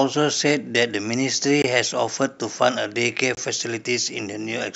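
At 1.62 to 1.64 s and again at 3.35 to 3.37 s the speech drops into a block of digital silence about 21 ms long, which fits a 1024-sample buffer that was not filled in time. The cut to silence and the return are abrupt, so each gap is heard as a short hole. Unlike a concealed packet loss or a faded dropout, nothing smooths or fills the gap.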